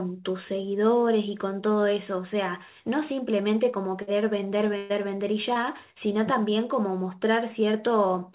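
At 4.02 s a burst of packet loss begins. Several consecutive packets failed to arrive in time, and the receiver bridged the hole by extending the last decoded sound for about 52 ms, fading it as it went. About 60 ms of the original audio is gone, so the sound jumps forward when real packets resume at 4.09 s. A longer burst of packet loss follows from 4.77 s to 4.91 s. Here about 123 ms of continued, decaying sound stands in for roughly 120 ms of lost audio. It is heard as a drawn-out held tone or hiss, and the audio then resumes further along with the stretch in between missing.

At 5.53 s there is a short concealed packet loss. About 20 ms never reached the decoder, and the receiver covered it by continuing the preceding sound for 20 ms before blending back into real audio at 5.57 s. The result is a brief smear or wobble rather than an audible gap. Throughout, the call audio has nothing above 4 kHz, which fits a narrowband telephone codec.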